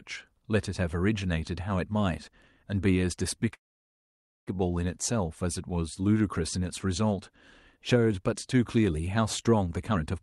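At 3.53 s the speech stops and a brief trailing sound dies away into nearly a second of silence before resuming at 4.49 s, with nothing lost. This call audio freeze likely comes from delayed packets draining the jitter buffer, so the wait itself became a gap.

From 9.66 to 10.14 s the speech hurries to about 132% of normal pace without any rise in pitch. This jitter buffer speed-up trimmed roughly 150 ms in small pitch-period slices to shrink an overfilled buffer and reduce delay.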